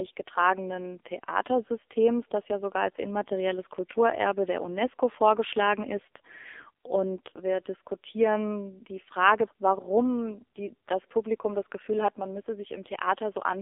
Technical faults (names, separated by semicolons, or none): AMR narrowband mobile codec